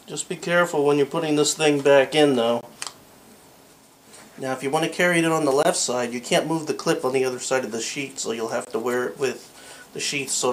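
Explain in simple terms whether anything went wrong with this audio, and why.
Short silent holes, 20 ms each, at 2.61, 5.63 and 8.65 s: a gap between chunks, where the audio arrived in 3-second pieces and a brief silence was left at each join.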